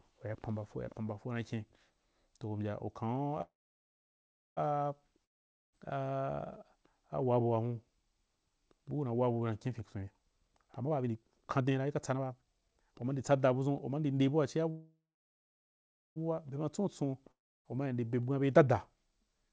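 At 3.42 to 4.59 s, a call audio freeze: the sound fades to near-silence for about 1.1 s, then resumes where it stopped. Late packets likely drained the jitter buffer. From 5.25 to 5.75 s, a long network dropout cuts to silence and roughly 0.48 s of speech never returns, likely because nothing arrived. Between "una wabu na kyen" and "abua tia buu", 9.80 to 14.14 s, a jitter buffer speed-up makes speech hurry at 126% without a pitch change, as the receiver trims pitch periods, about a second in total, to cut backlog. After "abua tia", 14.70 to 16.18 s, another freeze inserts a 1.46 s fading gap. A dropout at 17.31 to 17.67 s loses about 0.34 s. A milder speed-up follows from 17.86 to 19.50 s at 109%, removing around 0.15 s.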